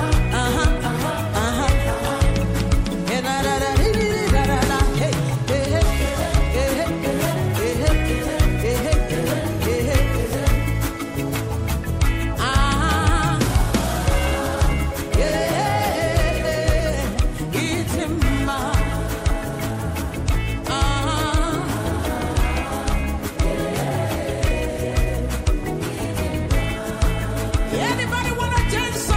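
No technical faults are audible.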